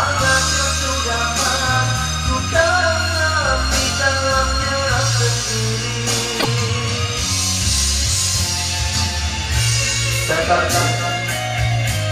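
At 6.39 to 6.46 s, the audio jumps ahead and the next 70 ms come out garbled, as a chirp, a noise burst or a brief gap. The likely cause is a broken MP3 bit reservoir: after frames were cut, decoding drew on another frame's bytes. The span fits two to three MP3 frames of about 26 ms. On a spectrogram it appears as a short disrupted band, and on the waveform as a discontinuity.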